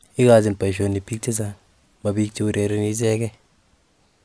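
Nothing in the speech stood out as a technical problem on listening.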